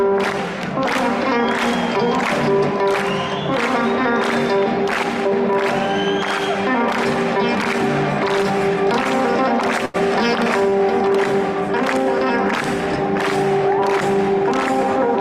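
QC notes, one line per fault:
9.85–9.96 s and 10.70–10.74 s, short stall from a late packet: the jitter buffer ran dry and the last sound was stretched, for about 86 ms and then 20 ms, before play resumed with nothing lost. This shows as frozen, smeared spectral columns and a repetitive waveform stretch with a slight level dip.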